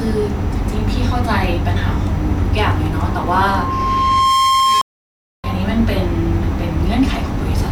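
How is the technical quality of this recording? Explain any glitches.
The recording has two clear faults, and they overlap.

From 3.08 s to 5.64 s there is loudspeaker feedback squeal. A microphone is picking up the loudspeaker it feeds. At one frequency the loop gain goes above one, so that frequency keeps reinforcing itself. Here it is a steady tone near 1.1 kHz. It swells over about a second and a half. At its peak it sits roughly 5 dB above the speech.

From 4.81 s to 5.47 s there is a stream reconnect. The connection dropped and the player went quiet for 624 ms. It then reconnected and started a fresh decoder partway through the stream. So the speech does not pick up where it stopped. It resumes about half a second later, and that stretch of speech is simply missing. The cut lands in the middle of the squeal.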